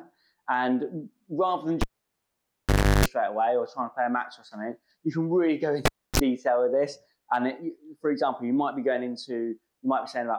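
At 1.81 s there's a cable pulled and plugged in: a pop, then the sound drops to near silence for about 1.2 s, a 50 Hz mains buzz of roughly 340 ms while only the plug tip is making contact, and another pop as things come back by 3.06 s. It happens again, shorter, at 5.85 s: about 0.29 s unplugged, a quick 33 ms buzz, and the return pop at 6.20 s.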